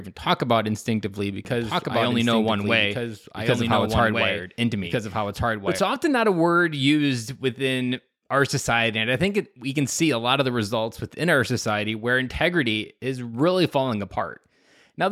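From 1.45 s, just after "talk about instinctively", until 5.79 s, where "often not a word" follows, the speech shows a doubled audio track. A second full-band copy runs about one and a half seconds behind the original, around 5 dB quieter, with no decay or room colouring, and it cuts in and out abruptly at both ends. The likely cause is the same signal being captured again through a slower path, or an edit leaving two offset copies.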